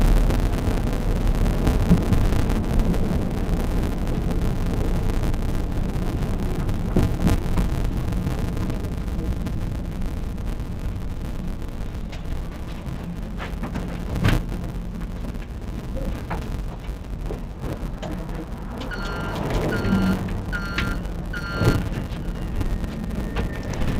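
From start to end, the audio shows interleaved audio read as planar. Alternating left and right samples are split into halves, each played at half speed. Blocks last 5.33 ms, which fits a 256-sample block. The result sounds dull and robotic, with a 188 Hz buzz.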